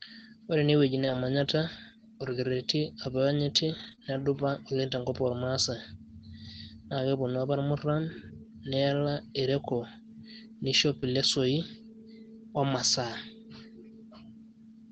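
At 1.01–1.15 s, 2.25–2.31 s and 3.79–3.93 s the speech turns briefly grainy and noisier, with no gap. These are lost packets rebuilt from error correction: the next Opus packet carried a low-bitrate copy, and the decoder played 80, 40 and 80 ms of that rougher stand-in.

Just before "oleng' tenkop", from 3.95 to 4.14 s, the sound smears and wobbles. This is short concealed packet loss, overlapping a second concealed stretch at 3.99–4.02 s: about 20 ms arrived too late each time, and the receiver extended the preceding sound to cover it. A further 20 ms rebuilt from error correction follows at 4.02–4.05 s.

At 10.99–11.04 s another concealed loss produces a short smear, followed by rebuilt frames at 11.02–11.04 s and again at 12.68–12.70 s, each a 20 ms patch of rougher audio. Throughout, the Opus call path limits the audio to 8 kHz.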